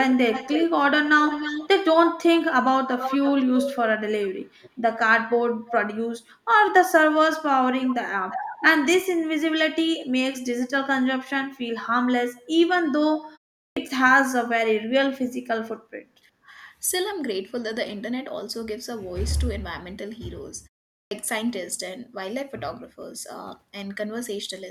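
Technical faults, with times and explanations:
0.13–1.68 s, 2.9–4.7 s, 5.67–5.72 s, 7.32–8.38 s and 12.36–12.40 s, echo leak: a delayed, fainter copy of the speech trails the original. The lag grows from about 307 ms to 375 ms across these stretches, and the copy sits about 10 dB below the speech early on, about 15 dB below around 5.7 and 7.3 s, and about 35 dB below at 12.4 s. This is likely a far-end loudspeaker whose echo canceller let part of the returned signal through. On a spectrogram the harmonic pattern repeats as a dimmer, right-shifted ghost.
7.91–8.12 s and 16.42–16.49 s, speech suppressed in double talk: the speech dips briefly, losing about 25 dB at its deepest over roughly a tenth of a second in the first case, and about 10 dB over roughly 70 ms in the second. With both ends active, the canceller likely mistook this talker for echo and attenuated everything. The spectrogram shows a short vertical dimming band across all frequencies, and the waveform envelope shows a notch.
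13.42–13.52 s, background gated by the echo canceller: the room tone drops by up to about 17 dB for roughly 100 ms while the loudspeaker side is active, then returns as the canceller releases its hold on the microphone. It is heard as a momentary hole in the ambience, close to a tiny dropout. On a spectrogram the low-level noise floor goes dark in a narrow vertical strip, and the waveform's noise band visibly thins before recovering.
13.68 s and 21.03 s, clipped start after a pause: after silences of 0.39 s and 0.43 s, the output device needed time to come back up, and about 85 ms and 82 ms of the next utterance were lost. The speech starts abruptly, missing its opening sounds. The waveform jumps from flat silence straight into the speech with no gradual rise, and the spectrogram shows energy starting with a hard vertical edge instead of a soft onset.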